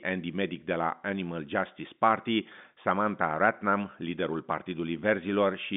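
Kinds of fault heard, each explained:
No faults are heard.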